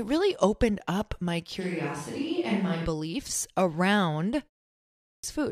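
From 1.62 to 2.84 s, just after "really opened up my", the sound turns roomy and hollow with thinner bass, most likely a switch to a distant microphone. Level barely changes, but faint room noise sits well below the speech.

At 4.83 s, after a 0.42 s pause, a clipped start after a pause removes about 405 ms of onset, up to 5.24 s. The output device apparently slept through the silence and woke late, so the sound begins abruptly, its opening missing.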